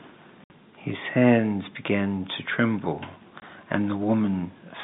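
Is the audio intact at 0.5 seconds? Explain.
No. At 0.5 s the speech is just coming out of a packet loss filled with silence that runs from 0.44 to 0.50 s. About 60 ms of audio is missing, which fits three lost 20 ms packets. The receiver played digital silence in their place, so the speech stops dead and restarts with hard edges. A concealed loss would instead repeat or fade the preceding sound, with no true silence and no clicks.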